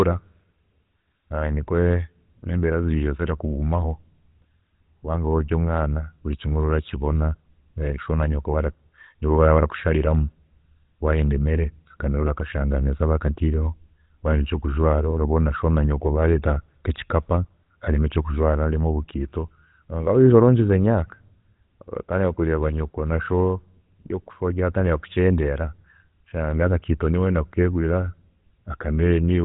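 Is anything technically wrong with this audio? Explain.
Yes, the whole clip has been through the GSM full-rate codec, and it's plainly audible from start to finish. This speech has been squeezed through a vocal-tract model fed by a coarse, regularly spaced pulse excitation, which fits the 13 kbps full-rate mode. That gives it a buzzy, gravelly roughness, like the speech is being pushed through a grille. Nothing comes through above about 3.8 kHz, so the top end sounds dull and boxed in.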